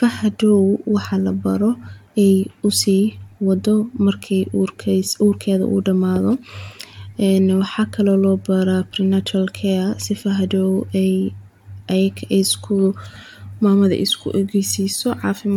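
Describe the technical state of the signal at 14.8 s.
At 14.8 s the audio is intact, with no technical fault audible at that moment.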